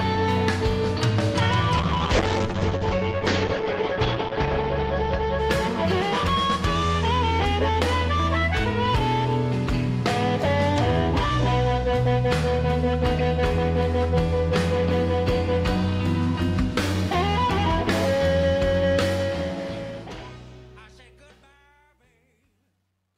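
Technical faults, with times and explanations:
1.78 to 6.45 s, call bitrate drop: the bandwidth estimate collapsed and the encoder fell from 48 to 8 kbps, staying at the bottom for about 2.6 s. The coarser coding makes the sound rough and watery, and the top end is cut from 20 kHz down to 8 kHz, so it also turns muffled. Unlike a simple low-pass filter, the dulling arrives together with grainy coding artefacts and clears as the bitrate climbs back.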